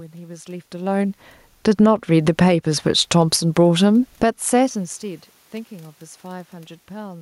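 From 1.52 s the speech and the room noise behind it sink together by about 6 dB over roughly a second, to 2.63 s. That is automatic gain falling: the gain control judged the input too loud and eased its gain down. Because the background drops along with the voice, the change comes from the system and not from the talker, who does shift position near 0.5 s.

Overlapping this, from 1.89 s to 4.89 s, the voice and the room noise swell back up by about 6 dB over three seconds. This is automatic gain rising: the control now found the level too quiet and raised its gain slowly. A second, quicker dip of about 5 dB cuts in between 4.08 s and 4.4 s, again with the background falling alongside the speech. The gain control is pulling down briefly during its own climb, close to where the talker moves again around 4.5 s.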